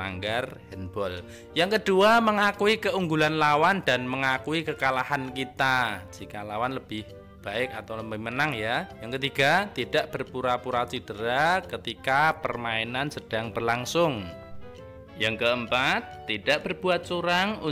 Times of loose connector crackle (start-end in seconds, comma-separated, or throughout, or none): none